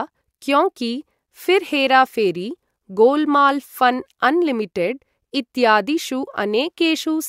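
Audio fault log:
No fault is logged for this speech clip.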